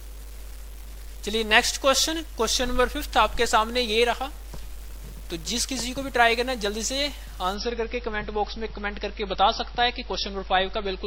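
From start to finish a coarse, gritty distortion rides on the sound and changes with it, most likely from low bit depth without dither: rounding to about 8 bits leaves error only around 25 dB below the signal. At 7.55 s the treble abruptly disappears above 5.8 kHz, with no gap, and stays dull until the end. That is an adaptive stream at a lower bitrate, consistent with a switch from roughly 128 kbit/s MP3 to about 25 kbit/s.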